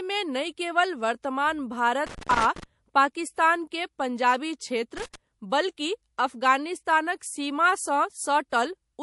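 Speech runs throughout with a watery, swirly texture and dulled treble, most likely from MP3 compression at a low bitrate that sounds like about 48 kbps. Unlike noise, this damage shifts frame to frame. Loose connector crackle, an irregular scratchy burst rather than codec swirl, hits at 2.07–2.64 s, just before "पाकिस्तान के पंजाबी", and again at 4.97–5.15 s, right after "पाकिस्तान के पंजाबी". Pre-echo puts a brief hiss ahead of attacks at 7.19–7.21 s (about 13 dB up) and 8.50–8.52 s (about 17 dB up). It differs from crackle by sitting only before onsets, which fits long 48 ms blocks with no short-block switching.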